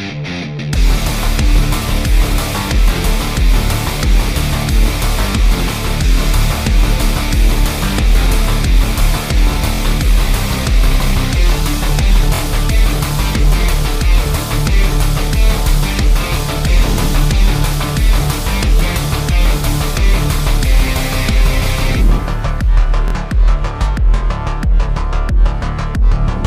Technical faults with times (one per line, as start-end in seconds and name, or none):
9.75-9.80 repeated buffer
12.35-12.40 repeated buffer
19.48-19.50 repeated buffer
23.08-23.13 repeated buffer